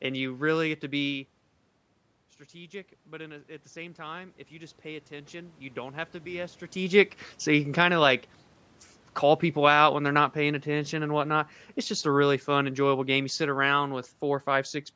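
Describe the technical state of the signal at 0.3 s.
At 0.3 s the speech signal is intact, with only the ordinary call microphone processing, which has no content above 8 kHz, and the room noise behind it.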